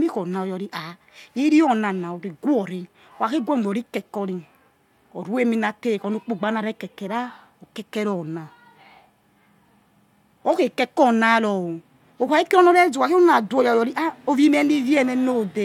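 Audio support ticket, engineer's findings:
No audible faults in the speech signal: level, continuity and timing stay steady throughout, with nothing pointing to a fault in capture, processing or playback.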